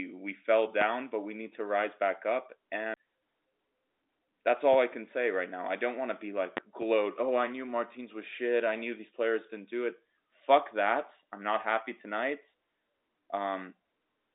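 Telephone-band speech, running roughly 250 Hz to 3.7 kHz, consistent with G.711 A-law coding at 64 kbps. Loud pops occur at 0.81–0.85 s (between "we fell" and "but we need to"), at 4.73–4.77 s, and as a double pop at 6.57–6.85 s (after "want to be like", before "oh i knew martins"). Each one reaches around 20 dB above the speech while the voice continues underneath, likely from a sudden voltage step such as a plug, switch, static or driver glitch. A CD skip at 2.94–2.97 s, just after "to rise back up", mutes the audio for around 30 ms as the laser jumps tracks. Playback then resumes from a different point on the disc's spiral.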